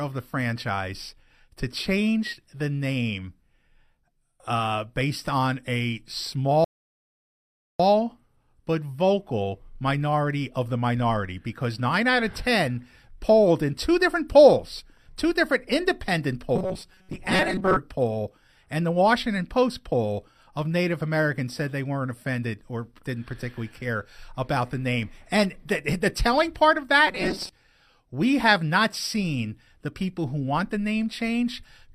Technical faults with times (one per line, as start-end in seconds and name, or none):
6.64-7.80 rebuffering stall
16.56-17.77 robotic sound from repeated short buffers
27.07-27.50 robotic sound from repeated short buffers